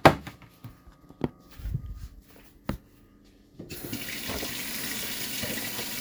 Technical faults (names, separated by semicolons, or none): none